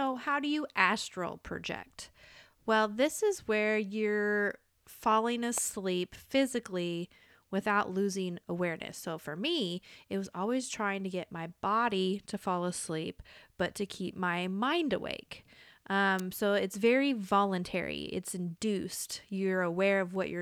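A sharp snap cuts across the speech at 5.58 s, and another at 16.19 s, each at roughly -20 dBFS and sitting on top of the talking. These are electrical switching spikes, likely a nearby switch or motor arcing and coupling into the audio line.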